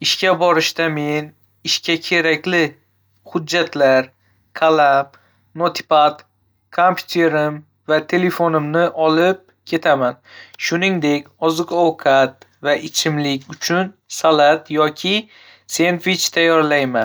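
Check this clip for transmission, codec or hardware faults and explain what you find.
One fault turns up, at 10.08 s: dropped samples. The stream most likely lost a couple of consecutive samples there, a gap far shorter than a millisecond. The waveform then jumps straight from one value to a later one instead of moving smoothly between them. That step is much too brief to erase any of the speech. It is heard as a single sharp click and shows as a thin vertical line across the spectrum.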